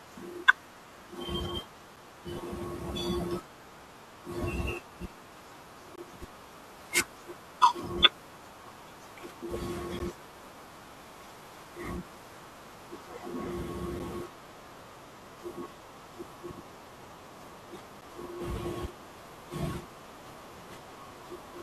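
Gaps between stream segments cut hard-edged silences into this speech at 5.96–5.98, 9.99, 13.99 and 18.01 s, every 4 s, where mismatched segment timestamps leave holes the player fills with silence.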